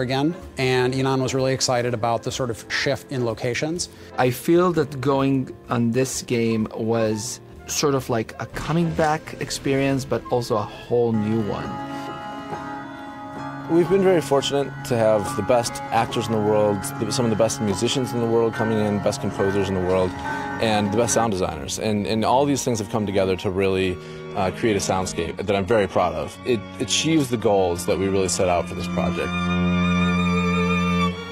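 From 24.04 to 30.04 s the adaptive stream drops to a lower bitrate: treble above 12.3 kHz vanishes abruptly, artefacts thicken, pointing to a low-rate HE-AAC fallback.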